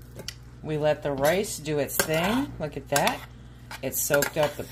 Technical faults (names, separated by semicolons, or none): none